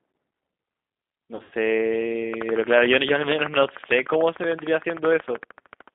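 The whole clip is speech through a G.729 codec at 8 kbit/s. The line band runs 200 Hz to 3.6 kHz. The voice sounds rough and plainly synthetic.

From 1.35 to 1.53 s, VoIP packet loss is concealed by the speech codec. About 120 ms went missing over 160 ms, in runs of up to 80 ms. The decoder stretches the last sound into a buzzy tone or coloured noise that fades.

From 2.34 to 5.89 s, a train of clicks ticks over the sound, including pauses. There are about fifty regular clicks at 13.3 per second, peaking roughly 15 dB above the signal. Likely cause is interference or a faulty connection or power supply.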